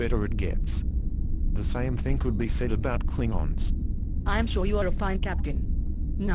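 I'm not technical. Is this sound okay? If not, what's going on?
Yes, it's fine; nothing in it sounds broken or out of place, so there's nothing to worry about here.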